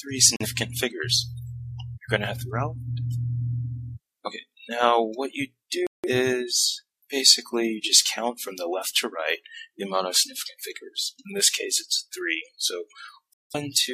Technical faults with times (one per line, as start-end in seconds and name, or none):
0.36-0.46 digital broadcast dropout
5.87-6.09 digital broadcast dropout
13.33-13.55 digital broadcast dropout